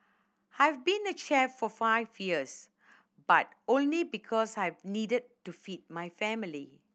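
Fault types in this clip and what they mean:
No technical faults detected.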